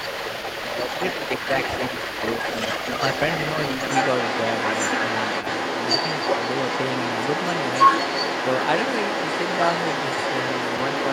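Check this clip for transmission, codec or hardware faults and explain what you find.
One fault runs through the whole recording: the other side's voice leaking through, from 0.0 s to 11.12 s. A second speaker's voice sits under the main talker the entire time, at roughly the same loudness, so the two compete rather than one clearly dominating. The likely cause is the talker's device playing the far end on a loudspeaker, with the echo canceller failing to strip that playback out of the microphone signal before sending it back.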